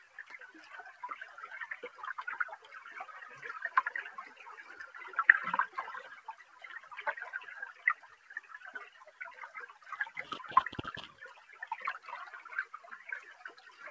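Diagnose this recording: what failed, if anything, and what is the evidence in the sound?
The level of these sounds never settles: held and decaying parts keep sagging and recovering while sharp onsets punch through, so the whole clip pumps and thins, with swings of around 10 dB. The failure is in call processing. A noise suppressor tuned for speech was left active on non-speech audio, treating steady tones and tails as background noise and attenuating them. The audio has nothing above 8 kHz, consistent with a wideband call codec such as G.722.

The sound cut by the noise suppressor is clearest at 0.0–0.24 s, 6.18–6.63 s, 7.72–8.5 s, 8.9–9.2 s, 9.71–9.86 s and 13.57–13.8 s. In each span, sustained or fading material drops noticeably below its surroundings, by about 9 dB at 6.18 s, about 8 dB in the 7.72–9.86 s cluster and about 6–7 dB at the edges of the clip. Here the suppressor's gain decision misread these steady portions as noise and clamped them harder than the rest.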